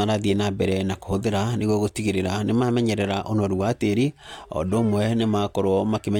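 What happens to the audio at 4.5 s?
Two unsynchronised clocks likely drift apart, slipping a sample roughly every 0.7 s, which gives faint regular clock slip clicks throughout 0.1 to 5.6 s, including 4.5 s.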